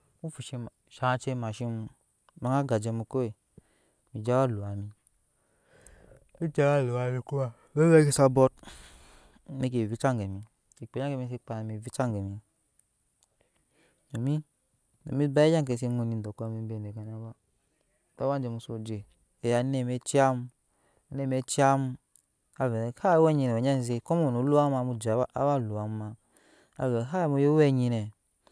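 No technical faults can be heard anywhere in the recording; the speech signal stays steady and intact throughout.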